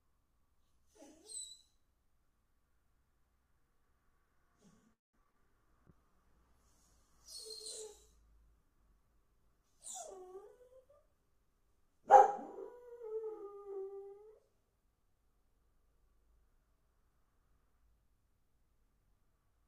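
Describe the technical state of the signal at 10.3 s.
A call bitrate drop runs from 5.89 to 11.3 s, with the encoder falling from 48 to 15 kbps after the bandwidth estimate fell. At 10.3 s it is coding coarsely at that low rate, so the audio sounds rough and muffled, its high frequencies trimmed away.

A jitter buffer speed-up overlaps it from 10.03 to 12.16 s. The receiver, holding more audio than its target, repeatedly cut out short pitch-period pieces, around 150 ms in total, so the sound plays about 8% fast at unchanged pitch and feels hurried.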